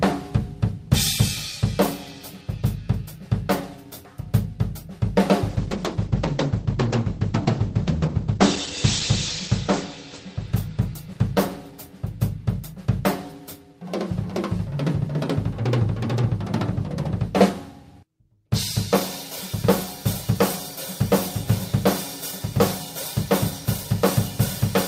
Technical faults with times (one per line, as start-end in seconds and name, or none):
5.51-12.63 call bitrate drop